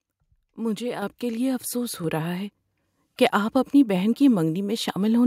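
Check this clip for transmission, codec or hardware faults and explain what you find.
The speech carries one kind of fault, occurring twice. Microphone volume stepped up at 1.02 s, just before "کے لیے افسوس", and again at 2.04 s, between "کے لیے افسوس" and "رہا ہے". The call software judged the input too quiet and raised the device's capture gain in a single jump, about 6 dB the first time and about 4 dB the second. Because the change happens at the microphone, voice and background noise get louder together, abruptly.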